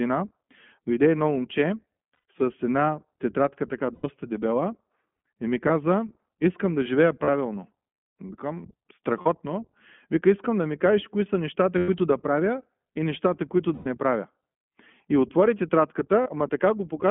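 The speech passes through the iLBC codec, a narrowband VoIP coder that squeezes each 20 ms frame into a compact excitation description on its own, which fits its 15.2 kbps mode. The line keeps only about 150 Hz to 3.4 kHz, so the sound is thin and muffled at the top. The codec damage is plainly audible throughout as a rough, slightly synthetic grain.

Lost iLBC frames break the stream eight times. At each loss the decoder repeats the last pitch cycle blended with noise, so the gap comes out as a held, faintly buzzy or breathy vowel. Because each frame stands alone, the sound recovers almost immediately after. The losses fall at 2.14 s, at 3.94 s just after "с една тетрадка така", at 5.68 s after "и ми", then at 7.24, 9.22, 11.78 s, at 13.74 s after "правя и нещата които", and at 16.22 s. They last 20 to 120 ms, the longest at 13.74 s.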